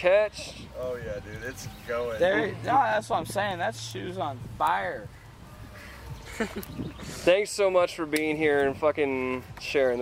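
No technical faults are audible.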